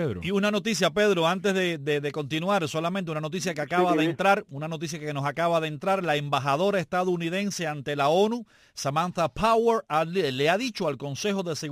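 Throughout the clip there is crude rate conversion: the sound was stretched to a new sample rate by repeating the nearest existing samples, with no filtering, which fits a 44.1 kHz to 48 kHz change. The error, roughly 25 dB below the signal, is a gritty, inharmonic fizz tracking loud and high passages. A spectrogram shows faint mirrored tones unrelated to the harmonics. Zoomed in, the waveform shows regular small steps.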